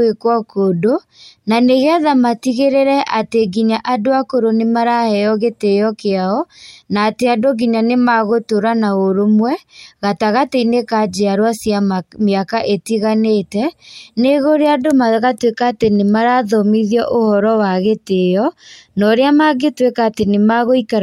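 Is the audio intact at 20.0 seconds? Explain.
Yes, at 20.0 seconds the audio plays through intact, with no dropout, click, distortion or other fault at that moment.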